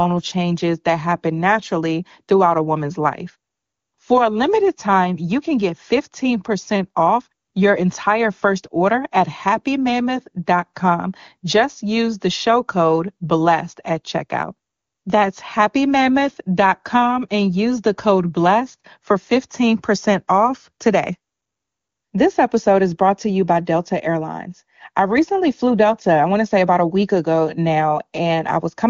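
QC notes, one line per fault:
Nothing to flag on this speech clip; no faults turned up anywhere in it.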